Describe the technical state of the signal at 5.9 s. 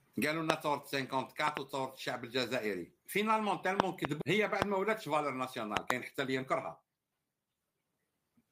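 A loud pop, two in quick succession from 5.77 to 5.93 s, most likely a voltage spike; the waveform shows tall spikes, the spectrogram thin broadband vertical stripes.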